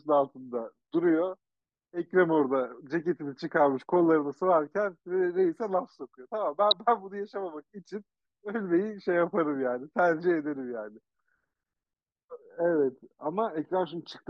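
It's a speech clip with one short glitch at 6.71 s: a corrupt frame decoded. There's a quick, fairly loud glitch, peaking at around -10 dBFS, that lasts only about as long as one codec frame, which points to a single damaged frame. Some bits in that compressed frame got flipped, and the decoder played it anyway. The garbled gains and codes put energy at frequencies that don't belong there, so that one frame comes out as a brief chirp, squeak or blip.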